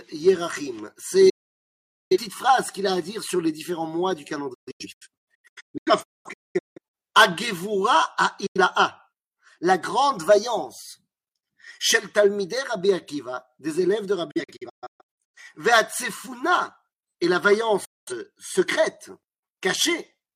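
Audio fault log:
1.29 to 18.12 s, digital broadcast dropout: the receiver mutes five times, at 1.29 to 2.17 s, 4.54 to 6.94 s, 8.46 s, 14.31 to 15.38 s and 17.85 to 18.12 s, each with an 8 ms fade. The two longer spans break into several short holes. Bad frames get silenced, so that audio is simply gone.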